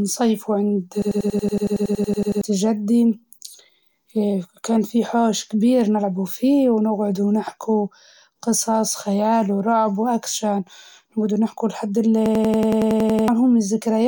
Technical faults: system hang loop

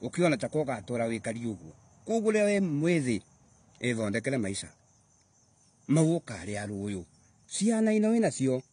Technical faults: AAC compression

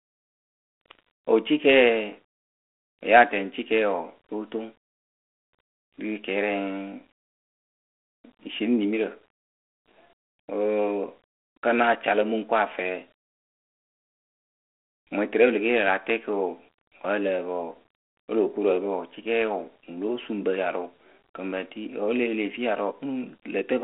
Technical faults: none

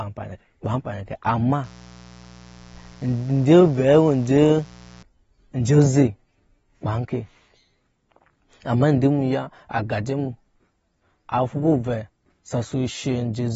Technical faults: AAC compression; mains buzz

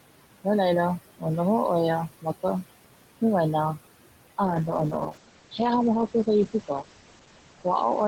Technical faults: noise suppressor artifacts; call bitrate drop

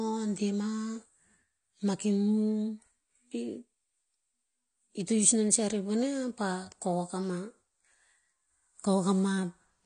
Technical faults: AAC compression

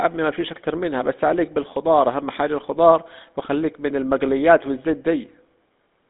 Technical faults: GSM full-rate codec

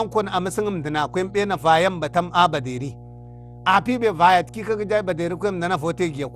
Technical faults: mains hum; generation loss

